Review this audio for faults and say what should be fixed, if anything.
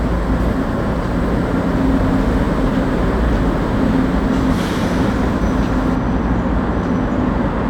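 From 5.96 s to the end at 7.69 s, the audio turns dull and muffled. That's de-emphasis applied wrongly: a treble-cut curve went onto material with no pre-emphasis to undo, or was applied twice, so the highs roll off smoothly, about 8 dB down at 10 kHz relative to 1 kHz. To prevent it, only apply de-emphasis when the source is actually flagged as pre-emphasized.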